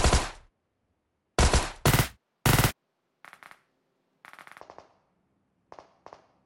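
From 1.87 to 4.61 s, a wrong sample rate fault sets in. The sound runs at twice its proper speed and jumps a full octave higher. Both shift together, which fits audio captured at 24 kHz but played back at 48 kHz without conversion.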